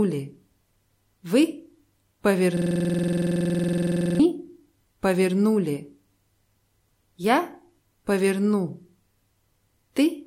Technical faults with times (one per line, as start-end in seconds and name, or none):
2.57-4.19 system hang loop